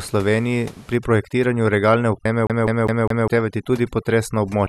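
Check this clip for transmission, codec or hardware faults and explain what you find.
Three faults turn up.

From 0.95 s to the end, at 4.68 s, overdone noise removal strips the audio. The room noise, about 25 dB below the speech, is over-suppressed: any frequency band sitting near the noise estimate is pushed down or shut off, and the quiet parts of the voice go with it. The background collapses to near silence dotted with twinkling specks. This differs from a low-pass or band-limit fault because the loss flickers band by band over time rather than cutting a fixed range.

At 2.25 s there are compressed frames skipped. Roughly three frames of 26 ms each never play, so the audio lurches ahead by about 70 ms. That distinguishes it from a plain dropout or a sample-level splice, and unlike a stuck disc nothing repeats.

From 2.47 s to 3.28 s the CD is stuck on one turn. A scratch keeps throwing the laser back one track, so the same 202 ms slice plays four times, with a brief mute at every jump. 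The result is the fast, even stutter of a skipping disc. A network packet repeat would vary in length and spacing, whereas this loop is identical each pass and perfectly regular.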